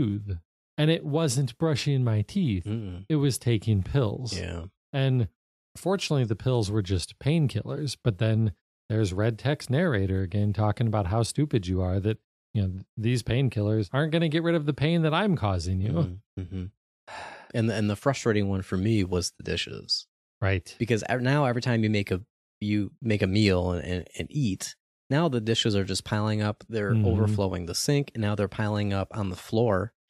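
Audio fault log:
No technical faults can be heard in this speech recording. Nothing in the audio calls for an entry in the log.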